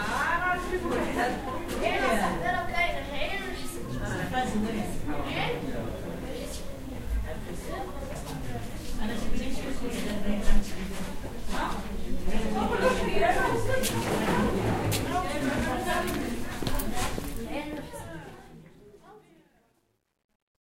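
A gain stage handling the closing fade of this everyday-sound recording keeps too few bits and adds no dither, causing truncation distortion on a fade from 17.11 s to 20.73 s, a coarseness that fits roughly 11-bit resolution. As the fade-out, starting around 17 s, approaches silence, the waveform collapses into crude steps, so the tail turns gritty, worst from 18.52 s to 20.73 s.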